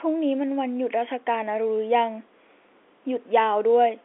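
No technical faults detected.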